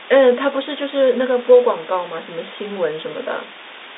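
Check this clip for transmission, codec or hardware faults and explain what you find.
One fault runs through the whole clip: low bit depth with dither. The speech has been stored with far too few levels per sample, which points to about 5 bits. Dither was added before rounding, so the rounding error turns into steady white noise instead of distortion. It is heard as a constant, even hiss about 15 dB below the speech, clearly audible across the whole telephone band up to 3.8 kHz.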